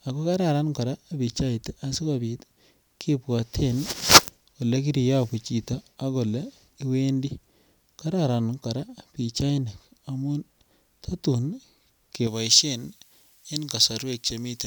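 From 12.27 s to the end, pre-emphasis is left on, consistent with a J.17 curve without de-emphasis: treble rises about 11 dB at 10 kHz, making the speech thin, bright and sibilant.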